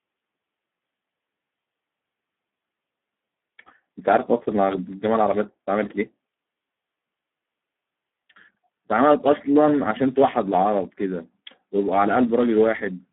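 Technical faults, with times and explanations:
Throughout, Speex codec: the speech sounds hoarse, buzzy and grainy, with a mechanical edge, consistent with a low-bitrate Speex setting around 8 kbps. At that rate there are too few bits to describe the excitation, so the coder substitutes a coarse approximation. The voice is also confined to a telephone-like band of 150 Hz to 3.5 kHz. A spectrogram shows nothing above 3.8 kHz and smeared, noisy harmonics below that limit.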